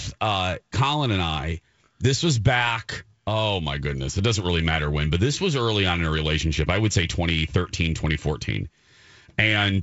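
Nothing's wrong here: this speech clip just carries the usual character of G.722 wideband telephone coding at 64 kbit/s, with content stopping around 7.7 kHz as you'd expect from that codec.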